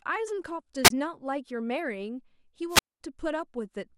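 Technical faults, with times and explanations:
0.84–0.90 s and 2.69–3.00 s: wireless microphone squelch dropout. A fading radio signal brings up hiss before the receiver's squelch mutes the output for 24 ms, then 214 ms.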